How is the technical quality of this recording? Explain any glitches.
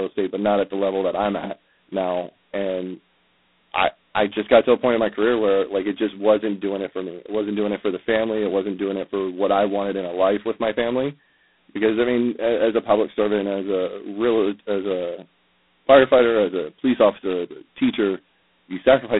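Quality is pretty rough: the speech runs through G.726 ADPCM coding from start to finish, and it's heavily damaged. The band sits at roughly 150 Hz to 3.5 kHz, with nothing above 3.9 kHz. The coder sends only a few bits per sample describing how far each sample strays from its own prediction, and the heavy damage points to the 16 kbit/s rate, the coarsest setting. That coarse quantising shows up as a harsh, rasping hiss riding on the speech and rising and falling with its level.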